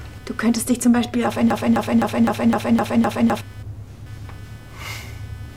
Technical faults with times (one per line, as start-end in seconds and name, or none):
0.00-5.57 computer activity noise
1.50-3.41 broken-record loop